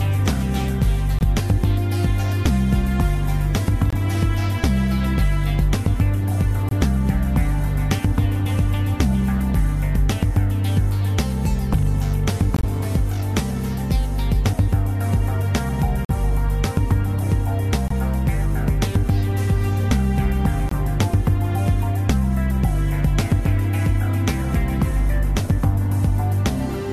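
Seven abrupt dropouts occur at 1.19–1.22, 3.90–3.95, 6.69–6.73, 12.56–12.65, 16.05–16.11, 17.88–17.91 and 20.69–20.73 s. Each is a corrupt frame muted: bit errors damaged compressed frames, the decoder rejected them, and the player substituted silence. The sound cuts out with no fade for 32 to 89 ms, the longest at 12.56 s, then resumes exactly on time. The hole lengths fit one or several whole codec frames lost per event.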